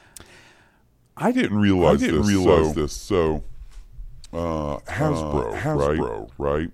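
From the start, the speech is heard twice. A doubled audio track runs throughout, with a second full-band copy trailing about half a second behind at much the same level. It has no decay or room colour. Likely a second, slower capture path or an edit holding two copies out of step.

At 1.35 s, a section at the wrong speed begins and lasts to the end. Playback runs at 0.848 times normal speed. The voice turns deep and slow, roughly three semitones lower. The section was likely fitted to the wrong clock.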